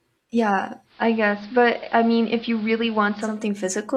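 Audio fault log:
0.85–3.41 s, digital radio blending to analogue: the receiver drops its digital stream and fades across to the AM version of the same station over about 0.21 s, then fades back at the end. On AM, the treble is cut, so the speech goes dull and boxy, and a bed of hiss comes up, roughly 25 dB under the signal. The level holds steady the whole way, so the change you hear is in tone and noise.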